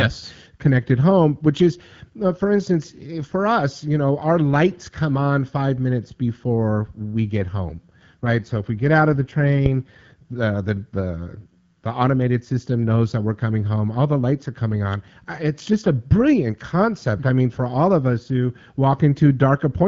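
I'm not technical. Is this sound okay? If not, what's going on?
No. From 7.24 to 10.35 seconds the speech turns rougher and more artificial, then clears up again. This is an AMR rate drop: the phone link briefly weakened, so the network told the HD Voice codec (AMR-WB, which is carrying the call) to describe the voice in less detail and use the saved capacity to protect against transmission errors. The sound doesn't cut out and keeps its range, but it loses smoothness until the rate steps back up.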